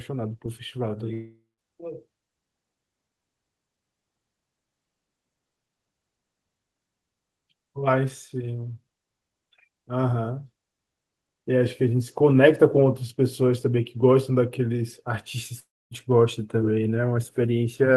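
Speech with two breaks, at 1.13–1.60 s and 15.60–15.93 s, where the sound smears into a fading buzz, falls silent, then resumes with roughly 0.44 s and 0.32 s lost, likely a long network dropout. Spectrograms show a blurred, decaying smear, then an empty gap.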